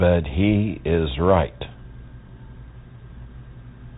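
From start to finish the speech sounds narrow and boxed-in, with nothing above about 3.8 kHz, scratchy s sounds, harsh distortion on loud bright moments, and a grainy hiss underneath. This is the Bluetooth CVSD headset codec, its damage plainly audible. CVSD sends one bit per sample, only saying whether the waveform steps up or down, with an adapting step size that can't keep pace with loud high sounds. The band limit and texture fit a 64 kbps headset link.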